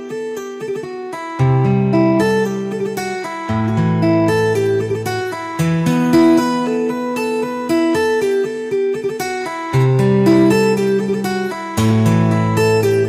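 A harsh, crackly edge appears on the loud peaks from 6.14 to 6.39 s, and again, for longer, from 10.00 to 10.53 s. This is hard clipping. In both passages the signal ran about 4 dB beyond what a stage in the chain could carry, so the tops of the waveform were sheared off flat. Those squared peaks generate high harmonics that were never in the original sound, and that is the brittle fuzz heard at those moments.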